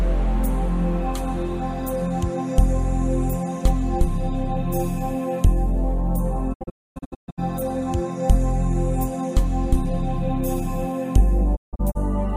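At 6.52 s there's a digital broadcast dropout: bad frames make the receiver mute, fading out over about 20 ms, leaving holes totalling 640 ms up to 7.40 s (longest 256 ms). A second one, 11.55 to 11.97 s, loses 224 ms (longest 160 ms).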